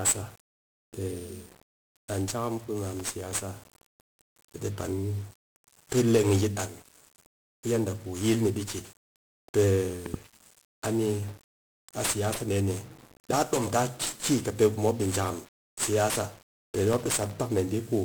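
Across the whole speech clip there is a dense fuzz and crackle, with the upper frequencies sunk in hiss. This is 1-bit DFPWM compression, heavy here. Each sample keeps only one bit, nudging an adaptive level up or down, so fine detail becomes strong broadband quantisation noise. The grain is consistent with a 48 kbps stream.

From 2.85 to 3.43 s a gritty tearing crackle rides on the speech for just over half a second. This is processor overload crackle. The processor missed around thirty buffer deadlines, each buffer, which fits a block of under a millisecond, dropping to silence with hard edges. The tiny gaps blur together into a rough crackling burst that ends once the load passes.

At 10.06 and 10.16 s two sharp pops jump out, roughly 10 dB above the speech, which keeps going underneath. This is a loud pop, a double one, likely caused by a sudden voltage spike from a switch, plug, static or driver glitch entering the signal. 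A single pop of similar strength follows at 13.57 s, between "siyasa deh ni daa" and "taa ki kɨ pe".

Straight after "di jakam siyasa pe", from 16.91 to 17.33 s, the same processor overload crackle comes back. Once again about thirty sub-millisecond buffers drop to silence, giving a gritty tear for roughly 0.4 s.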